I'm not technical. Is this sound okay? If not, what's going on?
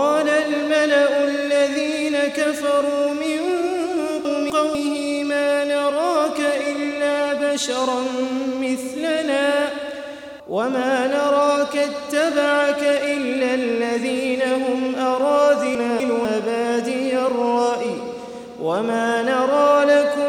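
No. Chunks out of order at 4.25–4.75 s and 15.75–16.25 s: two quarter-second pieces play swapped. Unlike a dropout, nothing is missing, only jumbled.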